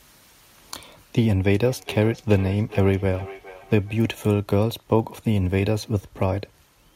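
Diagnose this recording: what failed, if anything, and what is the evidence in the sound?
Feedback echo between two devices, in call processing: from 1.64 to 4.22 s speech returns roughly every 0.4 s, about 19 dB down, as discrete repeats rather than smeared room reverb.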